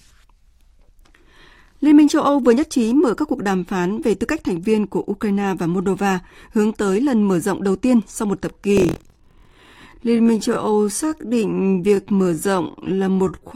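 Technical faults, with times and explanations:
8.49–13.55 s, time-stretched section: right after "đầu tiên sau một", the speech slows to about 0.6 times its pace at unchanged pitch and drags, likely from software stretching by repeating short pieces. A spectrogram shows elongated syllables.
8.75–9.85 s, buffer tearing: a robotic 43.1 Hz buzz rides on the speech. Each buffer, which fits a 1024-sample size, carries a slice of roughly 15% holding audio about 50 ms old. The waveform shows hard steps every 23 ms, and the spectrogram shows vertical seam lines.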